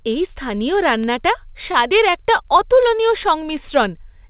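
From 0.12 s to the end, word clock ticks sound about twenty times a second. The receiver's clock drifts several hundred parts per million from the sender's, slipping a sample each time.

At 1.72 to 1.77 s, a late packet causes a short stall. The receiver holds the sound 16 ms too long, then resumes without loss, over band-limited G.711 audio.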